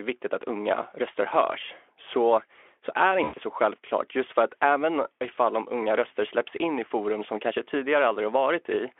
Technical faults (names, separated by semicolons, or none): VoIP packet loss concealed by the speech codec